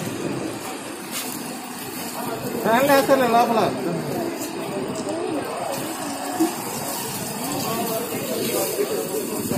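Nothing in this audio stood out as a technical fault on listening.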